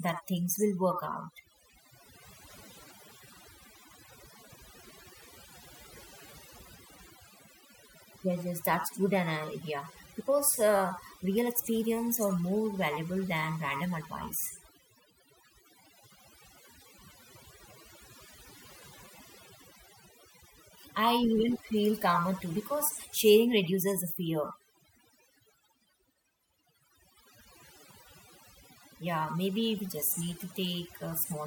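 From start to finish the speech carries the marks of overdone noise removal: a reduction stage set far too aggressively has pushed individual frequency bands down or out entirely wherever they sat close to its noise estimate, taking softer parts of the voice along with the noise. Between phrases the background collapses to near silence dotted with twinkling specks. On a spectrogram the gaps look almost black, scattered with isolated short bright dots, and the speech harmonics appear patchy and broken.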